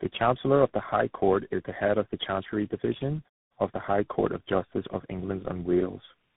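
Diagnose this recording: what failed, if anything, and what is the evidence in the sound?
Tandem speech coding throughout, codec stage: rough, warbly speech with nothing above 3.8 kHz points to four speech codecs in a row, each recoding its predecessor's damage.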